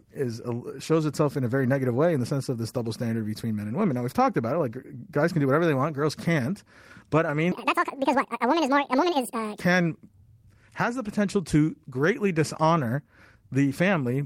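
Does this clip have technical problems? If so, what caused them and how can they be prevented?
Yes. From 7.52 to 9.60 s, a section at the wrong speed plays 1.86 times too fast, so the speech rises roughly ten semitones and sounds hurried. The likely cause is that segment being played or resampled at the wrong clock rate. On a spectrogram, the harmonics and formants jump abruptly upward and the syllables squeeze together, and the waveform looks compressed in time. Keeping every segment at one consistent sample rate, and checking clock settings before editing or export, prevents this.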